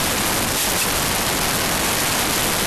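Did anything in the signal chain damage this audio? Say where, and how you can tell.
Yes. A wrong sample width at the sample-format conversion stage damages the whole clip: 16-bit speech is read as packed 24-bit, so mismatched bytes become loud broadband noise with the speech buried inside, running 1.5 times fast and high. A spectrogram shows a dense noise floor with faint, upward-shifted speech harmonics. The waveform looks like dense hash.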